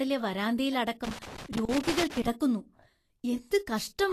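Speech, carrying plainly audible coding damage from start to finish: the top end stops dead at 14.2 kHz, and the upper treble has a grainy, hissy texture, with tones roughened and consonant attacks smeared. That pattern is most likely Vorbis compression at a low quality setting, consistent with something in the region of 37 kbps, where the encoder has dropped its cut-off and quantised the high-frequency residue so coarsely that fine detail turns into noise-like fizz. Between 1.04 and 2.27 s there is loose connector crackle, an irregular burst of scratchy crackle lasting about 1.2 s. It is the signature of a worn or dirty contact making and breaking intermittently as it shifts, chopping the signal in rapid, uneven bursts and throwing pops wherever any DC offset on the line is switched in and out.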